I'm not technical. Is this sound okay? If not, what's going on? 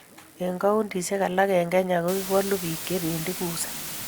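No. From 2.08 s to the end, the speech sits under a loud, steady hiss. This is low bit depth with dither: the sound is stored with only 5 bits, and added noise hides the rounding. Without dither, that rounding would sound like gritty, buzzy distortion.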